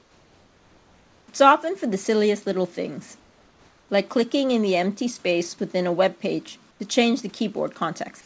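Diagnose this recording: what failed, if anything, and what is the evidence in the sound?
In call processing, discontinuous transmission likely halted sending in pauses, and the receiver substituted comfort noise in place of the background. From 0.00 to 1.28 s and 3.20 to 3.89 s the room's detailed noise becomes flat and featureless, about 4 dB quieter, and about 10 dB quieter at 6.71 to 6.80 s.

The voice detector was likely slow to register the restart, so the onset was clipped by the voice detector. From 6.78 to 6.80 s, about 20 ms of the sound's beginning was never sent and comfort noise played instead, leaving the sound starting abruptly without its soft lead-in.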